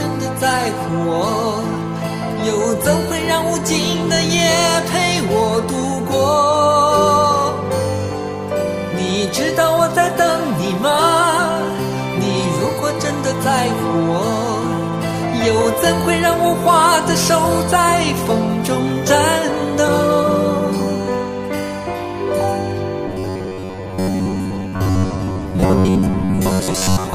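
From 23.08 s to the end at 27.15 s, the audio becomes robotic from repeated short buffers: a rigid 93.8 Hz metallic buzz. Most of the stretch is likely a repeated 10.7 ms block, shown as evenly spaced harmonic stripes on a spectrogram and identical repeating cycles in the waveform.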